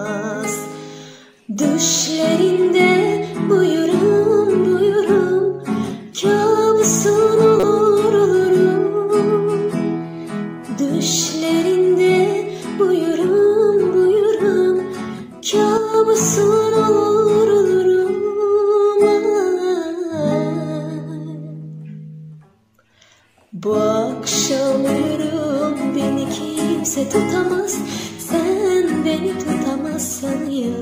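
At 7.60 to 7.64 s, a corrupt frame was decoded. Flipped bits in what sounds like a single compressed frame were passed to the decoder, which rebuilt the frame from misread codes and gains and placed energy at frequencies that don't belong to the surrounding audio. The result is a short, sharp burst of chirp-like noise, lasting only as long as that one damaged frame.

From 15.78 to 15.94 s there is a sudden gain jump, most likely from a gain setting being applied instantly from one sample to the next instead of being ramped. The level drops by about 6 dB in a single step, and the background noise drops with it. That shared shift makes the change sound abrupt and mechanical rather than a natural fade.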